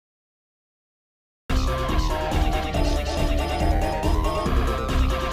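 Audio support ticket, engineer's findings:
Cut-off start. Digital silence from 0.00 to 1.50 s, then audio begins abruptly mid-sound at 1.50 s. No attack, no fade-in. Probable component: capture or stream start logic. Mechanism: recording armed late, so the first part of the sound was never captured and playback opens on a hard edge. The onset lands hard at 1.50 s with the sound already in progress. Check trigger timing and pre-roll buffer.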